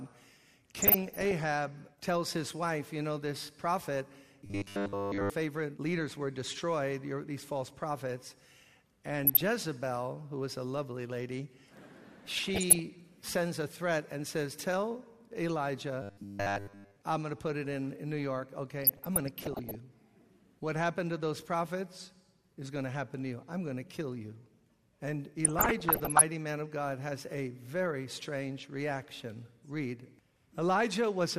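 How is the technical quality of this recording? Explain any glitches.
The recording has two recurring glitches: bursts of DAB burbling and two stretches of robotic buzzing.

DAB burbling occurs at 0.82–1.44 s, 9.25–9.41 s, 12.25–12.82 s, 18.82–19.75 s and 25.45–26.21 s. Weak reception lets bit errors, around 0.4 to 0.7 percent, slip past error correction into the MP2 data. Corrupted samples add short blips of noise in single sub-bands, and corrupted scale factors make sub-bands jump in level for up to a frame, producing a burbling sound. A spectrogram shows scattered rectangular blocks of misplaced energy in separate frequency bands.

The robotic sound from repeated short buffers runs at 4.46–5.30 s and 16.02–16.96 s. The audio turns into a rigid metallic buzz at 100 Hz that only loosely tracks the original sound. This is likely caused by audio arriving too seldom, so the software replays its last 10 ms segment throughout each stretch. 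The waveform shows an identical 10 ms cycle repeating, and the spectrogram shows harmonics stacked evenly at 100 Hz intervals.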